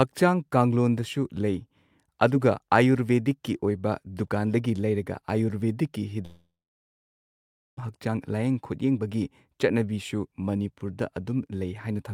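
Right after "ꯗꯨꯀꯥꯟꯗꯒꯤ ꯂꯩꯔꯒ ꯑꯌꯨꯔꯕꯦꯗꯤꯛꯀꯤ", at 6.25 s, the speech breaks off, likely a long network dropout. The receiver smears the last sound into a short fading buzz, then you get about 1.3 s of dead air until 7.79 s. Roughly 1.5 s of speech simply never arrived, so when audio resumes it jumps ahead with that chunk gone.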